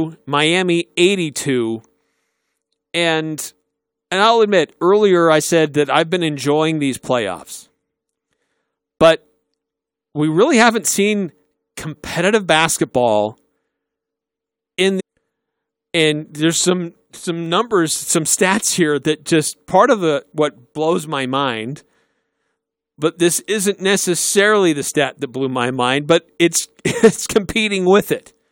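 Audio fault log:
14.99–15.01 s, stream segment skipped: The speech jumps ahead abruptly, with a brief blip at the join. It does not resume where it broke off. A stretch of the talk is gone, not paused. The likely cause is one segment of a segmented stream failing to load, so the player moved straight on to the next. The small blip is the splice where two unconnected stretches of speech meet.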